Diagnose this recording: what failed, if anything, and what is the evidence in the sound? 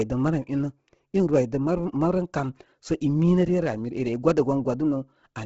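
Likely Bluetooth LC3 compression in the codec at a low bitrate near 16 kbps. The upper bands are zeroed and noise-filled, making speech breathy and grainy throughout, with nothing above 7.7 kHz.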